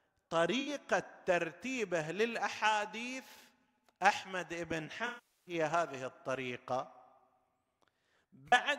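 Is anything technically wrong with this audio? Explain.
Yes. This speech has AAC frame loss with concealment at 0.60–0.68 s, 5.06–5.54 s, and 8.48–8.60 s, where the decoder patched missing frames from the last good spectrum. The two 64 ms gaps, the last scattered with runs of around 40 ms, sound smeared and phasey. The 405 ms gap decays toward silence and fades back.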